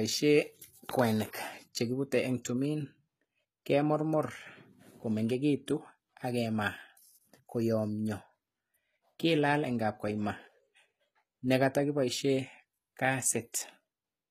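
From start to finish the s sounds come out gritty and lispy, with a bright but synthetic sheen and nothing above about 14.9 kHz. This is likely HE-AAC compression at a rate near 20 kbps, with the treble rebuilt from copied lower bands.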